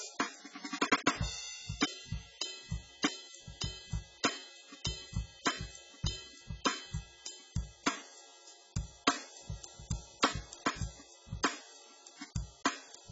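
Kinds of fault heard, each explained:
AAC compression: Present throughout, the music is likely coded with AAC-LC at a very low bitrate. Nothing remains above 7.6 kHz, so it sounds dull, and the sparse spectrum leaves a smeared, warbling, fizzy texture on sustained sounds and high content.
Repeated buffer: At 10.25 s, a tiny piece of audio about 1.3 ms long plays one extra time when fresh data arrives late. The hard join makes a click or brief buzz rather than an audible stutter, which fits a 64-sample buffer.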